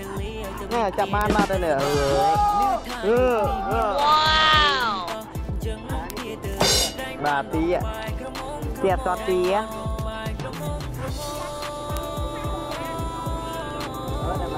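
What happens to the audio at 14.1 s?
At 14.1 s the sound carries word clock ticks, part of a train running from 0.13 s to 14.58 s at about ten per second. A receiver clocked independently, off by a couple of hundred parts per million, drops or repeats single samples, giving sharp, unevenly strong ticks whose steady rhythm sets them apart from random crackle.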